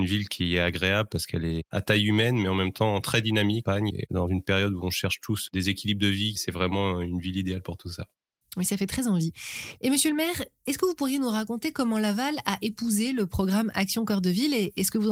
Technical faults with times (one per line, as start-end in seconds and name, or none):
3.65-3.67 skip ahead
3.75-6.50 jitter buffer speed-up